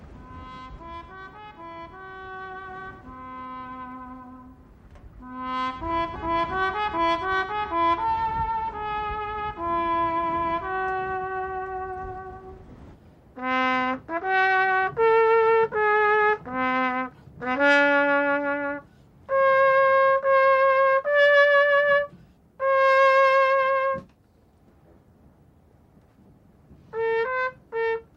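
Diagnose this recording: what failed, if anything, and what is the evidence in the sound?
At 6.15 s the sound jumps forward with no gap: a skip ahead, where around 0.4 s of queued audio was dropped either on the network or by the jitter buffer shedding latency. On a waveform or spectrogram the two sides butt together as a hard splice, with partials breaking abruptly.

Between 6.78 and 7.50 s, and again between 8.16 and 8.52 s, the audio runs about 8% then 11% fast at unchanged pitch: jitter buffer speed-up. The receiver repeatedly removed pitch-period-length slices. A spectrogram shows compressed timing with harmonics still level.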